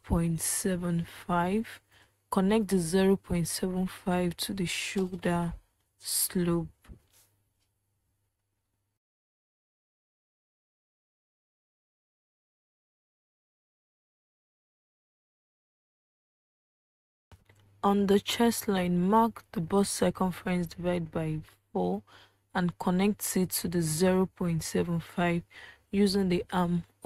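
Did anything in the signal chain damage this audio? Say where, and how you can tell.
No, nothing in the signal chain audibly damaged this audio.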